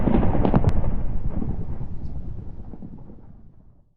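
At 0.56 s a loud pop breaks in, two sharp thumps in quick succession ending by 0.71 s, standing roughly 15 dB above the surrounding level. The likely cause is a sudden voltage step or pulse entering the chain, from a plug, switch, static discharge or driver glitch, which the downstream circuits shape into a sharp pop or thump. Unlike a dropout or a digital click, the sound carries on uninterrupted underneath.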